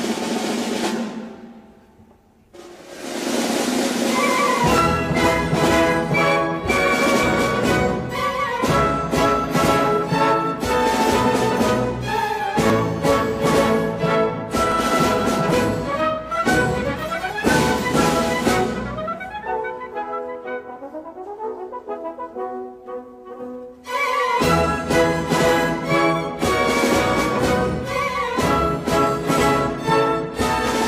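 Brief skips interrupt the audio at 0.84–0.87 s, 4.78–4.82 s, 12.70–12.72 s and 14.72–14.75 s, each removing roughly 20 to 45 ms. This is overlap between stream segments: with 2-second segments whose timestamps overlap, the player discards the overlapping stretch even though it wasn't duplicated. On a waveform each spot shows an abrupt discontinuity; a spectrogram shows a thin vertical broadband line at each jump.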